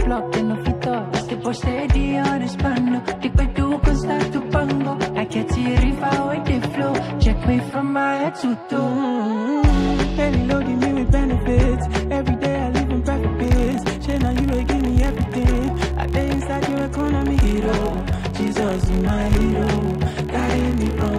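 From 13.44 s to the end, a filter restarted on every block, losing its state at each boundary, so the audio carries a level-following buzz at about 46.9 Hz, which fits a 1024-sample block.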